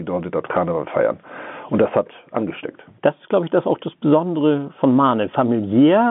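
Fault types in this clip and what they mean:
Nothing stood out on listening to this speech clip.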